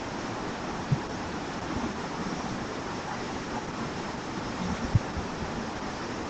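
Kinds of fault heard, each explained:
Opus voice compression: the speech is band-limited to 8.4 kHz by SILK coding, with coarse, hoarse, slightly robotic texture throughout, which fits a low bitrate around 12 kbps.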